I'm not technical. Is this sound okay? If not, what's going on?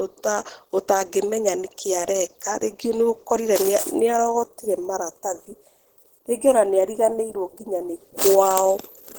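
No. Throughout the recording the speech sounds plainly hoarse and grainy, with a muffled, rough texture. This is likely Opus compression, where the audio was squeezed hard to save space and the encoder filled in missing detail with noise.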